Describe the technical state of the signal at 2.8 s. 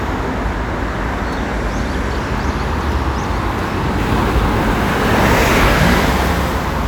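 At 2.8 s the audio is intact, with no technical fault present at that moment.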